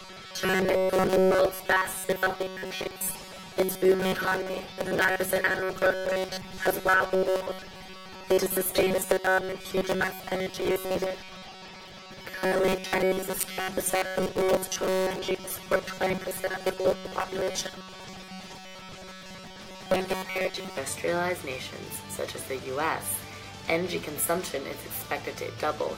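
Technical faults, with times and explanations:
0.01–20.78 s: robotic sound from repeated short buffers. A rigid, metallic buzz near 188 Hz, likely from audio arriving too seldom, so roughly two-thirds of the time is filled by repeating one short buffer.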